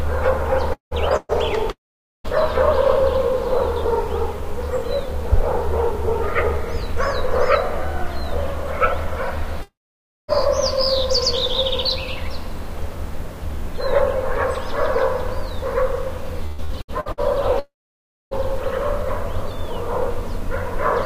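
From 0.73 to 0.94 s a long network dropout likely interrupts delivery: about 180 ms of audio never arrives, and the receiver stretches the last sound into a brief fading continuation before roughly 120 ms of near-silence, after which the sound resumes with that stretch missing.

From 1.16 to 1.32 s a burst of packet loss removes about 120 ms. The receiver holds the previous sound and turns it down across the hole, giving a short fading smear with only a moment of silence before the audio jumps ahead.

Further long network dropouts, each likely an interruption in delivery, follow: 1.71 to 2.27 s (about 540 ms lost, roughly 480 ms silent), 9.62 to 10.31 s (about 660 ms lost, 570 ms silent) and, after the next fault, 17.59 to 18.34 s (about 720 ms lost, 610 ms silent). Each begins with a decaying continuation of the last sound, settles into near-silence for most of its length, then cuts back in further along.

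Between 16.46 and 17.20 s repeated packet loss strikes five times, the longest gap 120 ms, so nearly half of that span is patched by repeating the preceding sound. The rapid alternation of real and synthesised fragments gives a choppy texture with pieces dropped out.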